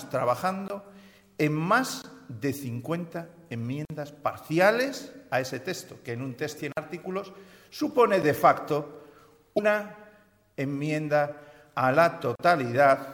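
Ticks and brief holes at 0.68–0.70 s, 2.02–2.04 s and 3.85–3.90 s are blocks of digital silence: the samples drop abruptly to silence and return without a fade. At 6.55–6.59 s there is damaged data in a compressed stream, where the decoder misreads corrupted frames and loses sync. Further dropouts follow at 6.72–6.77 s and as a single tick at 8.22 s. A second burst of damaged data comes at 9.55–9.60 s, and a final 40 ms hole at 12.35–12.39 s.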